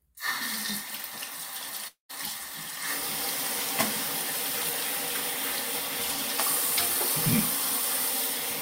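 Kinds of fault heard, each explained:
Long network dropout: from 1.87 to 2.11 s the sound gives way to a smeared buzz that stretches the last moment for about 0.22 s and fades, leaving roughly 0.13 s of near silence before the audio resumes further along, with about 0.22 s of material simply gone. This is likely a run of lost packets: the receiver kept extending the final sound it had, then ran out and went quiet until fresh audio arrived.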